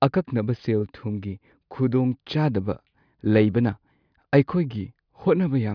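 No technical faults can be heard anywhere in the speech.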